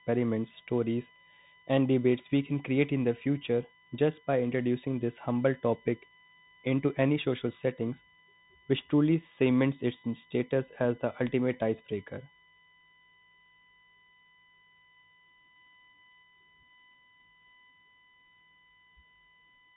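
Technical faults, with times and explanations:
Throughout, USB whine: a fixed-pitch tone sits on a 1 kHz fundamental with harmonics, strongest at 12 kHz, roughly 25 dB below the speech. The bus's 1 ms frame rhythm leaks in through power or ground. On a spectrogram it shows as unbroken horizontal lines at 1 kHz multiples.
Throughout, Bluetooth CVSD headset codec: the speech is narrowband, with nothing above 3.8 kHz. The coder sends only up-or-down steps at a one-bit rate, which fits a 64 kbps stream, so s sounds turn scratchy and a granular hiss lies underneath. A spectrogram shows a hard ceiling near 3.8 kHz.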